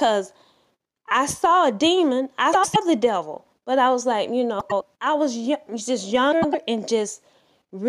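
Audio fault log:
2.53–2.76 s, 4.59–4.83 s, 6.32–6.55 s: frames out of order. In each window of about 0.23 s of speech, two adjacent runs of about 105 ms play swapped, which fits four frames per run, giving a garbled flutter. Unlike a dropout or skip, no time goes missing and the surrounding speech keeps its pace. Unlike a stutter, nothing repeats. The correct material is present but out of sequence.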